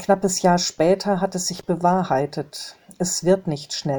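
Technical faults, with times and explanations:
1.55–1.63 s, loose connector crackle: a brief, irregular burst of scratchy crackle lasting about 80 ms. A worn or dirty contact in the signal path is making and breaking as it shifts, chopping the audio into fragments, and any DC present turns each break into a pop.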